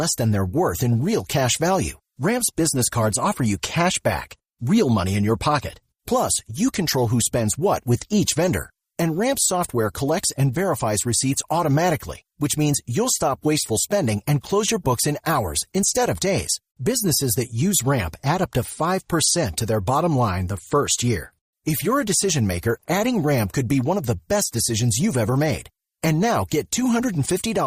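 No technical faults are audible.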